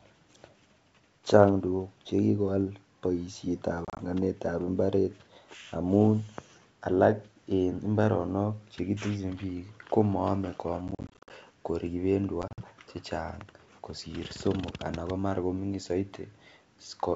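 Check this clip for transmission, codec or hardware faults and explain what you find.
The clip has packet loss on an ADPCM call, in three bursts: 3.85 to 4.02 s, 10.88 to 11.31 s and 12.42 to 12.63 s. Each burst drops chunks of speech, the longest runs 30, 50 and 50 ms, totalling about 90, 230 and 90 ms. The silent gaps desynchronise the decoder's predictor and step size, so speech resumes slightly distorted, at times with a click or at the wrong level. A waveform shows flat, hard-edged holes, and a spectrogram shows blank vertical strips.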